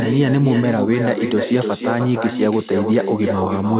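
A speech recording with an echo with no canceller running the whole way through: every phrase comes back about a third of a second later, only about 6 dB down, thin, as the far end's loudspeaker leaked into its mic and nothing cancelled it. The 4 kHz top end fits ordinary narrowband phone coding.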